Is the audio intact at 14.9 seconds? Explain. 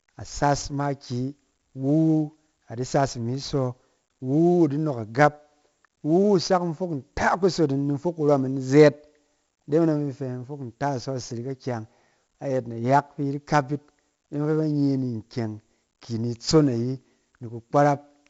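No. At 14.9 s, as across the whole speech clip, heavy 4-bit ADPCM compression codes each sample as a coarse step from a prediction, adding gritty hiss that tracks loudness. A spectrogram shows noise haze under loud frames and nothing above 7.7 kHz.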